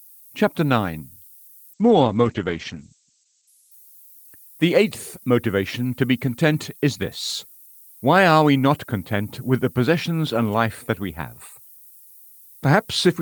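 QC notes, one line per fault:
Throughout: low bit depth with noise shaping. Steady hiss about 25 dB below the signal, climbing toward the top of the band, which fits roughly 9-bit audio with the rounding error pushed upward. A spectrogram shows a constant haze thickening at high frequencies.
1.75–4.79 s: call bitrate drop, ending just before "motivation to be content". The sound turns rough and muffled as the top band falls from 20 kHz to 8 kHz, which fits an encoder dropping from about 32 to 10 kbps. The roughest stretch lasts about 1.2 s. A spectrogram shows the band above 8 kHz empty.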